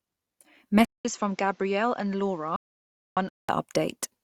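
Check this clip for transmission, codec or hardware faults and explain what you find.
Two faults stand out in this speech recording: a change of input device and a stretch of complete silence inside it.

Input switched to a poorer device, 0.85 to 3.49 s. After a gap of about 200 ms the sound drops roughly 10 dB and loses everything above 7.6 kHz, turning duller and boxier, with a new noise floor sitting about 35 dB under the speech. This is likely the recorder falling back to another microphone or a headset's call profile, whose narrower band, different tone and own hiss take over until the original input returns at 3.49 s.

Audio dropout to silence, 2.56 to 3.17 s. Within the degraded section the sound cuts out entirely for about 0.61 s. The gap is digital silence, with no room tone or hiss, so whatever was spoken there is lost. The likely cause is that the input was briefly lost, through a disconnect, a failed link or a momentary mute, while the recording carried on writing silence.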